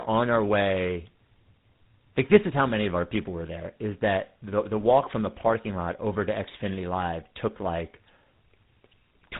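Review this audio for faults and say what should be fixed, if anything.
Rough, muffled, warbly speech throughout: tandem speech coding, consistent with three speech codecs re-coding each other's output, ending in GSM full rate.

To prevent it, carry the call end to end in one codec, or pass the coded stream transparently across links instead of decoding and re-encoding at each border.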